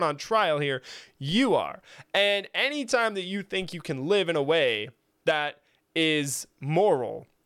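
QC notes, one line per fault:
1.32 s and 3.62 s, DC step: the waveform's zero line jumps by about -38 dBFS just after "on trial here" and again after "anytime that you", before "you can live in". Each jump gives a low thump, then the offset drains away through a roughly 2 Hz high-pass while the speech continues unchanged.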